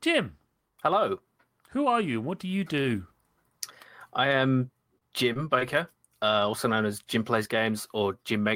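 Speech with two kinds of network fault. Just after "and what do you", from 2.81 to 2.95 s, a short stall from a late packet holds the sound about 22 ms. Nothing is lost. The delay grows, then 10 ms is trimmed back. Short concealed packet loss follows after "I am", at 4.98–5.03 s, then 5.33–5.37 s and 5.59–5.63 s. Each drops 20 ms, patched with 16–25 ms of extended sound that briefly smears.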